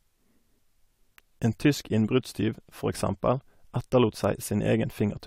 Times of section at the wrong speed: none

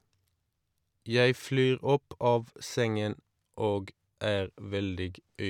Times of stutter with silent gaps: none

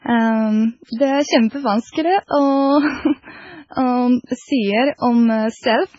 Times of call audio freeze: none

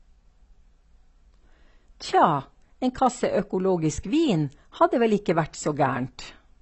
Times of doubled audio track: none

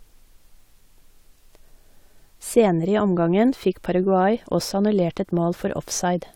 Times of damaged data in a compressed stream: none

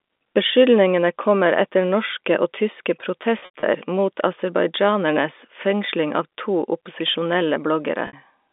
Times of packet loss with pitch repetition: 3.39-3.63, 8.07-8.13

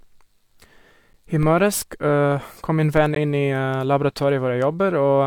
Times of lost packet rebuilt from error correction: none

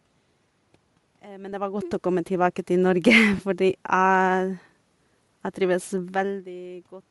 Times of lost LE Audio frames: 3.37

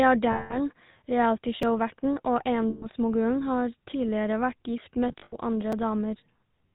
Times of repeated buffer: 1.63, 5.72

